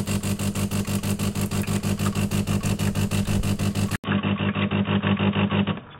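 From 3.96 s, after an 80 ms silence, the sound turns dull with nothing above 3.8 kHz. The level stays about the same, but there is new quiet background noise, likely an input switched to a poorer device; the gap and changed background set it apart from simple filtering.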